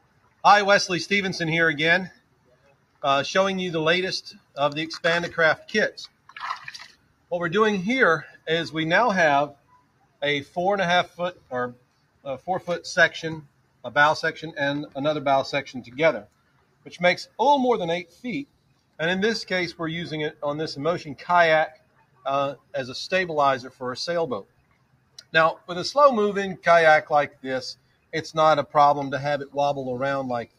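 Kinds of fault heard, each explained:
Noise suppressor applied to music or sounds: a suppressor built for speech stays active over the whole clip and treats steady tones, ambience and decays as noise, so the level swings by around 15 dB. Unlike a plain gate, it keeps reshaping held sound rather than only closing in gaps.
Sound cut by the noise suppressor: some passages sink further, by up to about 18 dB, at 0.00–0.44 s and during roughly 4 s of each of the spans 2.09–13.84 s and 15.84–28.74 s. Held or fading sound drops while sudden onsets pass, unlike a dropout, which silences everything.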